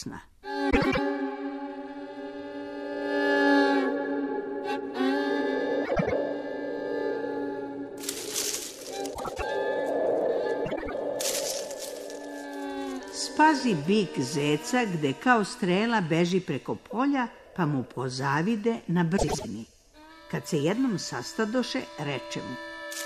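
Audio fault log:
0.70–0.99 s, 5.85–6.13 s, 9.14–9.43 s, 10.65–10.94 s, 19.17–19.45 s: frames out of order. Each stretch is a brief garbled flutter. Two neighbouring blocks of about 105 ms each play swapped, which fits runs of four frames decoded in the wrong order. No time is lost.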